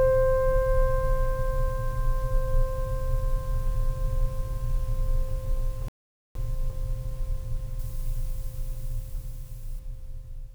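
At 5.88 s the music stops dead for about 0.47 s and resumes at 6.35 s. This is a playback stall, likely the player running short of data or being blocked. Unlike a dropout, there's a single sustained silence mid-phrase rather than brief clicks or gaps. From 7.79 s to 9.79 s the treble jumps: pre-emphasis left on, with the CD 50/15 µs boost never undone, lifting 10 kHz about 8 dB above 1 kHz. The music turns thin, bright and sibilant, a shelf-like tilt rather than a narrow resonant peak.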